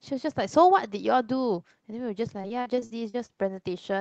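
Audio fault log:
2.41–3.31 s, repeated packet loss (robotic sound): choppy stretch with eight brief holes, the longest 44 ms, each patched by repeating the preceding sound, leaving about 27% of it concealed.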